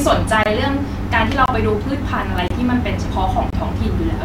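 At 0.43 to 0.46 s, then 1.46 to 1.48 s, 2.48 to 2.50 s and 3.50 to 3.53 s, the speech drops out for about 23 ms each time. That's a classic gap between chunks: the audio arrived in 1.0 s blocks and something, padding or a player starting each block late, left a sliver of silence at every join. Nothing's missing, but you hear a short hole ticking along once a second.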